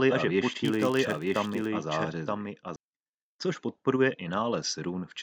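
Right from the top, the speech is already doubled: a second copy of the same audio runs about a second behind the original, roughly 5 dB down, and it stays until 2.76 s, where it cuts off abruptly. That's a doubled audio track. The echo is full-band and completely dry, with no decay or room colour, so it's likely the signal got captured twice, once through a slower path, or an edit left two copies out of step.

Overlapping that, from 0.65 s to 1.70 s, there's a buzz at about 93.8 Hz riding on the sound and tracking its level, louder where the speech is louder. That's a filter restarted on every block: it loses its state between blocks and starts each from silence, so every block boundary kicks off a small transient. At that repeat rate the ticks fuse into a steady buzz, which fits a 512-sample buffer.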